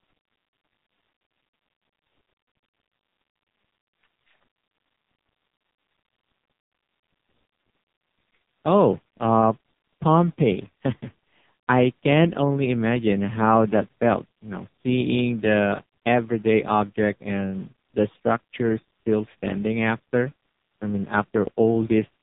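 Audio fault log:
Throughout, AMR narrowband mobile codec: the speech is squeezed through a heavy-damage mobile codec setting, which fits the 4.75 kbps mode, so the voice comes out buzzy and synthetic, rebuilt from a crude vocal-tract model fed by sparse pulses, with nothing left above about 3.8 kHz.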